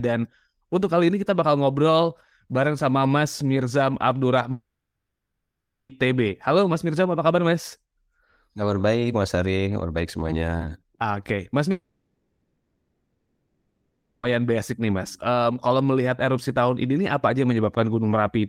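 Long network dropout, at 4.51 to 5.92 s and again at 11.71 to 14.26 s. The speech stops, most likely because the audio stream was interrupted in transit, and the receiver papers over the hole. In the first gap the fill fades quickly, leaving about 1.2 s of silence. The second gap runs about 2.5 s, almost all of it a smeared, fading buzz with only a brief silence. The speech resumes at "basic nih" with the lost section gone.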